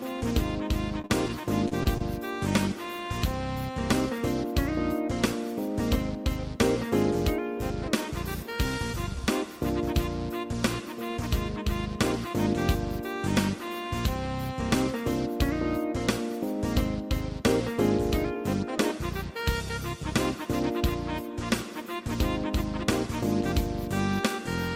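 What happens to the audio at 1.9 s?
At 1.9 s the audio is inside a run of repeated stalls (stutter) lasting from 1.01 to 2.02 s. Packets arrived too late for playback, so the jitter buffer kept running dry. It happened seven times, and each time the last sound was stretched to cover the wait. The gaps total about 150 ms, the longest is 39 ms, and only about 20 ms is actually lost, so the sound drags and hiccups rather than dropping out.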